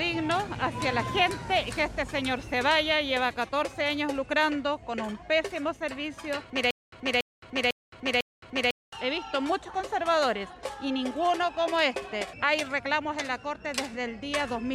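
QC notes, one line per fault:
6.71–8.93 s, stutter with silent gaps: a fragment of about 284 ms plays, then about 216 ms of digital silence follows, on an even 500 ms cycle that repeats four times before normal playback resumes. The regular spacing points to a stalled player or stream that likely replayed its last buffered chunk on each retry and then ran dry. The audio that should have played during this span is lost.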